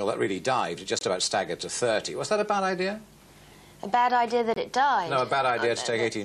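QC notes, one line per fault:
0.99–1.03 s, corrupt frame muted: a clean 40 ms dropout that starts abruptly, where the decoder rejected a damaged frame and the player filled it with silence.
4.54–4.58 s, corrupt frame muted: another sudden 40 ms hole, likely a frame or two refused and muted, with the timing around it kept intact.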